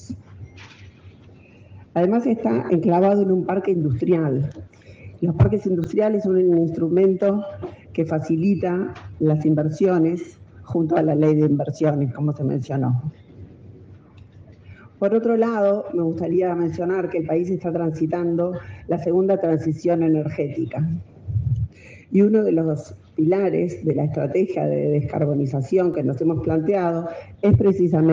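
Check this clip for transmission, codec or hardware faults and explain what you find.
Two blocks of digital silence appear, at 5.84 s (5.33 ms, consistent with a 256-sample buffer) and 25.94 s (1.33 ms, about 64 samples). Output samples were zeroed, likely from a missed buffer deadline, so the audio cuts abruptly in and out, heard as brief ticks.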